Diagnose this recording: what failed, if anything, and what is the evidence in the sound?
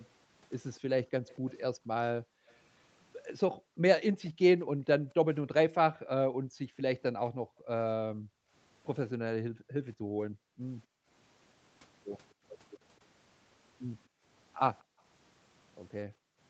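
Call processing let an echo leak through, likely from a far-end loudspeaker the echo canceller did not fully cancel. A faint copy of the speech trails 246 ms behind from 0.75 to 1.54 s (about 30 dB down) and at 2.48–2.54 s (about 40 dB down). A fixed, discrete lag distinguishes it from room reverberation, which smears continuously.

The echo canceller also gated the background, pulling the microphone down by up to about 40 dB at 2.19–2.48, 3.52–5.17, 6.29–11.08, 14.08–15.02 and 16.06–16.4 s. Only the room sound dips, and it returns when the canceller lets go, unlike network packet loss, which would cut speech abruptly. The Opus path's 8 kHz ceiling is separate.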